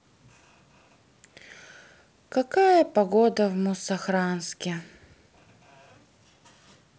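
No technical faults are audible.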